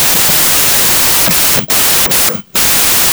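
Speech buried under loud noise, sped up about 1.5 times throughout: a wrong sample width, 16-bit data read as packed 24-bit, unlike byte-order errors, which keep speed unchanged.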